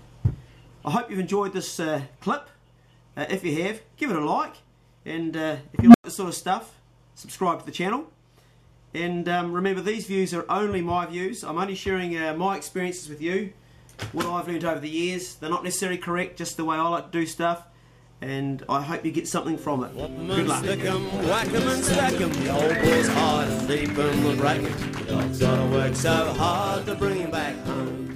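An unstable filter fault occurs from 5.79 to 6.04 s. A low tone of roughly 200 Hz swells out of the sound over about 148 ms and is driven into clipping. A recursive filter stage with bad coefficients fed its own output back with a gain greater than one, so each pass grew louder until the values overflowed. The signal then drops to silence for 100 ms while the filter resets.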